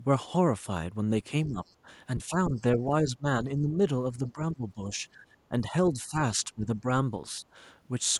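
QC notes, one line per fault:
1.47 to 7.44 s, speech suppressed in double talk, at 1.47–1.6, 2.28–3.25, 3.6–3.78, 4.19–4.91, 5.14–5.31, 5.49–5.53, 5.93–6.86 and 7.32–7.44 s: an echo canceller likely could not separate near-end speech from overlapping far-end echo and pulled the near-end gain down with it, so the speech dips by about 5 to 15 dB in short chopped patches, the longest totalling around half a second, and sounds thinned and broken.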